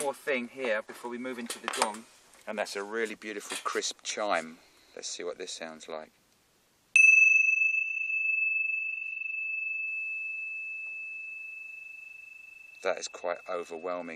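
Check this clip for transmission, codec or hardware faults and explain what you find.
Nothing here points to transmission, codec or hardware trouble.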